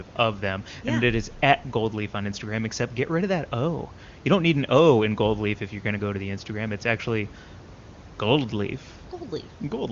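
No technical faults can be heard anywhere in the speech. Room noise sits about 21 dB below the talking, and the AMR wideband (HD Voice) codec leaves at most faint traces, as fits one of its higher rates.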